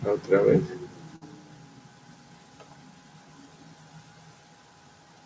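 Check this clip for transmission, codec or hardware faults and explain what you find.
One transmission fault is audible in this speech, carried over a call path whose G.722 coding leaves nothing above 8 kHz.

Burst of packet loss, 1.16 to 1.23 s: consecutive packets went missing, so the receiver extended the last sound for 52 ms while fading it, heard as a brief held buzz or hiss. Playback then jumps ahead, with 60 ms of speech skipped.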